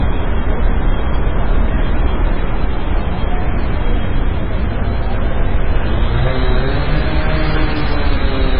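From start to finish the sound carries two layers of compression damage at once, which points to transcoding between lossy codecs, likely a very low-bitrate MP3 pass followed by a Vorbis encode. Nothing survives above 5.2 kHz, so the top is dull and boxy, while warbling, smeared transients and watery swirl sit over everything. On a spectrogram the energy stops at a flat ceiling near 5.2 kHz, with patchy, blocky holes scattered below it.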